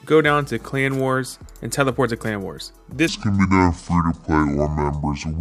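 A section at the wrong speed, likely from playback or editing run against the wrong clock, begins at 3.08 s and lasts to the end at 5.41 s. The audio there plays at 0.63 times its recorded speed, so it drags noticeably and drops about seven semitones in pitch.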